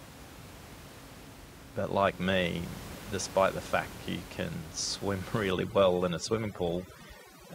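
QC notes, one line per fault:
5.52–7.55 s overdone noise removal: room noise about 15 dB below the speech drops and breaks into twinkling specks, as over-aggressive band gating also mutes quiet speech detail, unlike codec swirl.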